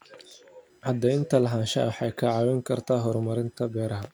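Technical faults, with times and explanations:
Throughout: computer activity noise, a faint buzzing chirp riding under the speech at roughly 45 dB below it. It pulses at around 1 kHz, giving it a whiny, textured edge. Changing processor, graphics or mouse load shifts the ground the audio circuit shares with the computer, so the interference follows what the machine is doing. It rises and falls with the computer's activity, not with the speech, and that is what separates it from a steady mains hum.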